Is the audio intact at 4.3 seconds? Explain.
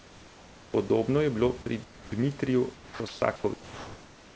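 No. From 3.54 s to the end, the room background becomes a steady, featureless hiss about 4 dB quieter: likely comfort noise in place of the background, synthesised during transmission pauses, rather than a gated silence.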